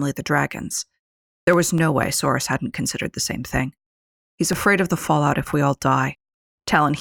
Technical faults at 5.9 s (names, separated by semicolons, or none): periodic USB or driver dropouts